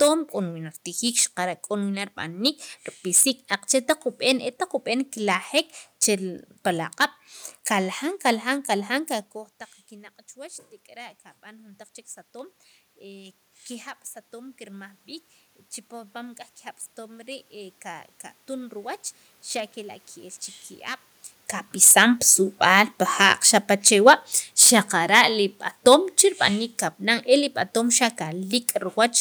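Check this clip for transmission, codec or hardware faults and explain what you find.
Two faults are audible. Throughout the speech, loud peaks crackle harshly: hard clipping, with peaks driven about 9 dB past what a stage could pass, flattening a small fraction of samples. From 22.49 to 28.13 s, the voice and room noise sink together by about 4 dB: automatic gain falling, as the gain control gradually lowers its level after judging the input too loud or its background noise too strong. The level shifts near 9 and 21 s come from the talker moving.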